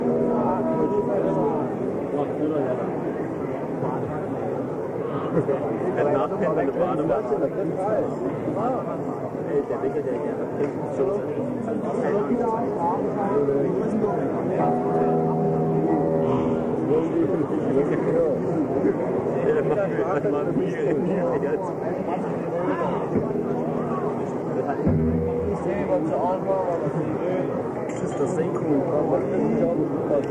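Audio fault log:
Nothing stood out on listening, and no fault was heard anywhere in the audio.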